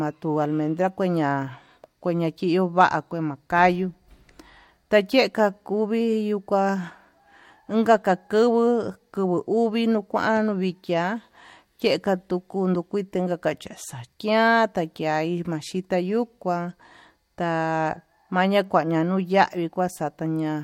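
Listening to this speech recording, nothing stood out as a technical problem at any point.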